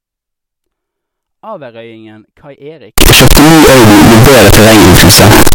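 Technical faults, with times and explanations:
2.98 to 5.54 s, signed and unsigned mixed up: harsh, very loud distortion in which soft sounds are as loud as strong ones, unlike clipping; likely 16-bit samples misread, flipping the top bit.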